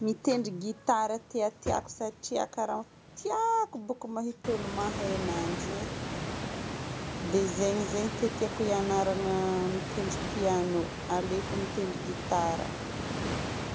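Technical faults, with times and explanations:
No technical faults are present in the signal, which shows the normal band limit of call microphone processing with nothing above 8 kHz, and room noise that rises by about 22 dB at around 4.5 s to sit about 7 dB below the speech, both part of the recording itself.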